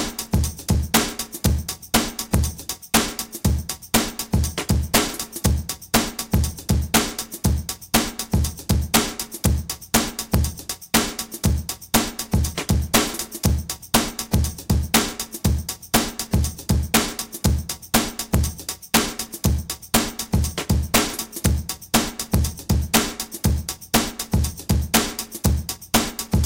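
Integer overflow runs through the whole recording. The signal was driven about 4 dB past the top of its integer range. Instead of being held at the limit, each peak wrapped around to the opposite extreme. Only a small fraction of samples, well under one percent, go over. But every one of them jumps across the full scale. The result is violent, sharp cracks on the loudest moments. They are far harsher than ordinary clipping.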